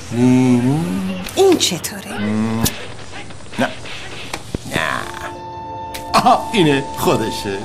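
A loud pop hits at 2.64–2.67 s, then two at 4.55–4.78 s, each roughly 15 dB above the sound, which continues underneath. A sudden voltage pulse, likely from a plug, switch, static or driver glitch, shows as a sharp waveform spike and a thin vertical spectrogram line.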